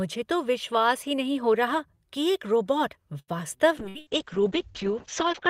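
At 3.19 s a short stall from a late packet holds the sound for roughly 86 ms, until 3.31 s. The jitter buffer ran dry while waiting, so the receiver stretched the last fragment of audio instead of leaving silence. When the packet arrived, playback resumed exactly where it had stopped, so no audio is lost. The result is a sustained smear with a faint buzz, and everything after it plays 86 ms later than before.

From 3.80 s to the end of the clip, a call bitrate drop takes the encoder from 40 kbps to 7 kbps, and it stays at that floor for about 1.7 s. At this rate Opus codes the signal far more coarsely and narrows the audio bandwidth from 20 kHz to 8 kHz. The speech loses its top end and sounds muffled, with a rough, watery texture that continues through the final second.

Inside that degraded stretch come two bursts of packet loss, at 3.89 to 3.98 s and 4.01 to 4.09 s. In each one the receiver concealed the gap for under 60 ms by extending the preceding sound and fading it down, which gives a brief held buzz or decaying hiss. 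Playback then picks up about 60 ms further on, so a short piece of speech is missing after each burst, twice in quick succession.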